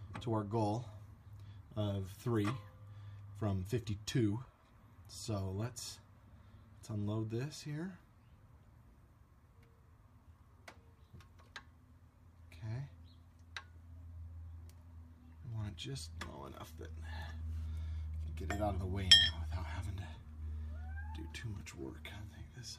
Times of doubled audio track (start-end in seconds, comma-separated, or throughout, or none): none